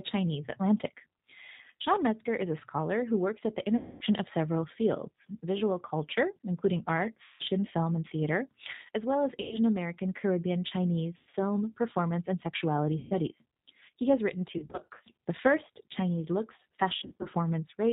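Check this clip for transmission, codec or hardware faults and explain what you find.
Two faults are audible: G.729 coding throughout, and seven bursts of VoIP packet loss that the speech codec conceals.

The G.729 codec runs throughout. It codes the speech at 8 kbit/s from a vocal-tract model and drops everything above 4 kHz, so the speech sounds muffled, rough and synthetic.

VoIP packet loss concealed by the speech codec occurs at these times:
3.77–4.04 s
7.24–7.44 s, between "visual culture including art" and "film and theater as"
9.41–9.59 s
11.17–11.39 s
12.99–13.15 s, after "performance and sexuality"
14.52–15.01 s, after "has written"
16.96–17.28 s

At each of these points the decoder fills the missing frames by extending its last pitch and filter, so the speech smears into a fading buzzy tone or coloured noise and sounds weak for a moment afterwards.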